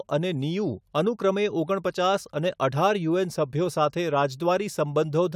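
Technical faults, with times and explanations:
No technical faults are heard in this speech clip.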